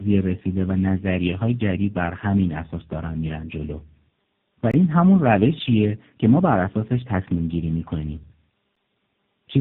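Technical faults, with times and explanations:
Throughout, tandem speech coding: the speech has been through about three different speech coders in a row, each squeezing what the last one left. That stacks up as rough, muffled, warbly speech with nothing above 3.7 kHz.
4.71 to 4.74 s, block of digital silence: about 23 ms drops straight to silence and comes back with no fade, leaving a tiny hole. The length fits an unfilled 1024-sample buffer.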